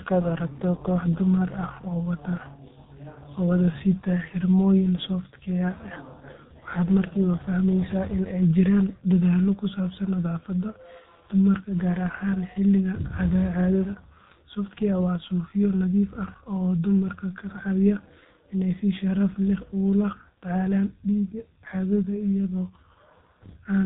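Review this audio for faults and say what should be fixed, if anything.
The speech path ran through the G.723.1 codec throughout, in 30 ms frames at a rate that fits about 6.3 kbit/s. Nothing above 3.8 kHz survives, and the sluggish voice model leaves the speech heavily muffled and hoarse, with smeared consonants. Route the recording over a wideband codec or uncompressed link instead of low-rate telephony coding.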